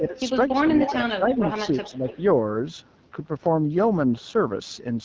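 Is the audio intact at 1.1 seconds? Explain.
No. From 1.12 to 1.3 s the speech dips by up to about 15 dB, most likely speech suppressed in double talk: with both sides talking, the echo canceller mistook this talker for loudspeaker echo and attenuated it along with the echo. Throughout, the AMR wideband (HD Voice) codec is plainly audible as a rough, raspy texture, which fits one of its lowest modes, near 8.85 kbit/s. Speech is modelled from pulses below 6.4 kHz, with noise filling above.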